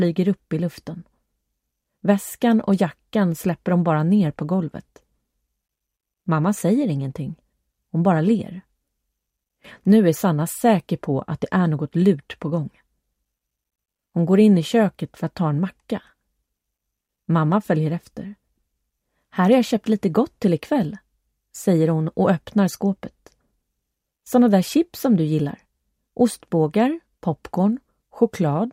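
No technical faults can be heard anywhere in this audio. Nothing in the sound points to a problem at any moment.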